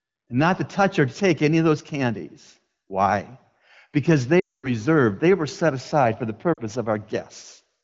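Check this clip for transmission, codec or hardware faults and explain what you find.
Two dropouts from lost AMR speech frames. From 4.39 to 4.70 s, about 240 ms of frames, consistent with a run of twelve 20 ms frames, failed their checksum. The AMR-WB decoder kept repeating the last good pitch and vocal-tract settings at falling gain, so the speech drops to near silence within two frames before returning weak or rough. At 6.53 to 6.58 s, a 40 ms loss gives a brief dip.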